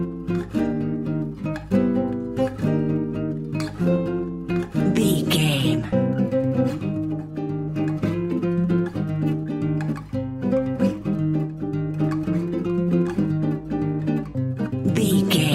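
No technical faults are audible.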